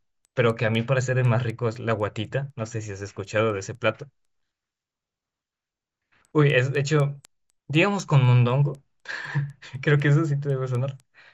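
From start to finish the speech carries a steady ticking at 4 Hz, one tick every 250 ms, caused by a resampler restarted on every block. The 16 kHz to 48 kHz conversion was run on each 250 ms block in isolation, so the interpolation filter lacked the real neighbouring samples at every boundary and left a small discontinuity there. The ticks ride on the speech and fall away in the pauses.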